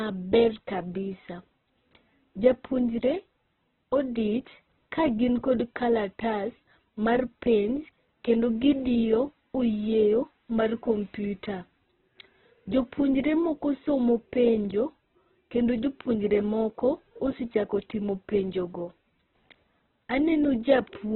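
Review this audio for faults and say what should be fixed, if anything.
From start to end the speech is rough and grainy, with nothing above 4.1 kHz. This is heavy Opus compression, likely at a very low rate near 8 kbps, filling starved bands with folded or noisy content. A spectrogram shows a hard 4.1 kHz ceiling over smeared, noisy bands. Prevent this by encoding Opus at a higher bitrate with full bandwidth.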